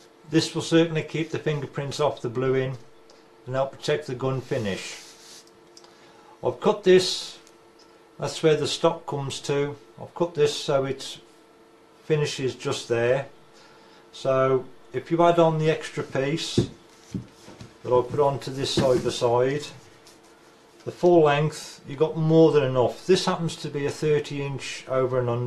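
No technical faults can be heard in this audio.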